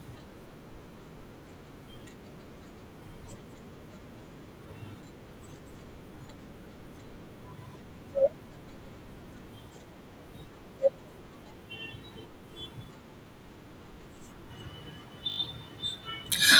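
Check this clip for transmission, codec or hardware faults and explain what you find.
One fault: a repeated buffer from 15.30 to 15.38 s. Audio arrived late, so a 20 ms piece played four extra times, giving a brief 50 Hz buzz with hard joins.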